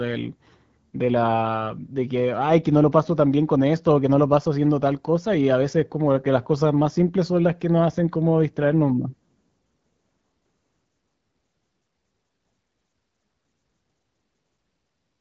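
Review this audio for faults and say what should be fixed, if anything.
Nothing stood out on listening, so there is nothing here that needs fixing.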